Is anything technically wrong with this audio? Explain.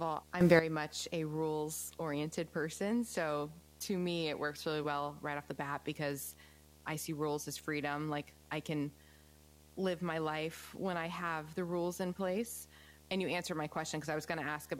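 Yes, there are two faults in this speech. Video or display buzz runs throughout: a screen or video cable couples into the audio path, adding a steady 75 Hz field-rate buzz with hash above it, sitting well below the speech. A sudden gain jump occurs from 0.41 to 0.59 s, just before "much a rules oriented". A digital gain step applied without a ramp is the likely cause, and speech and background noise jump together by 12 dB.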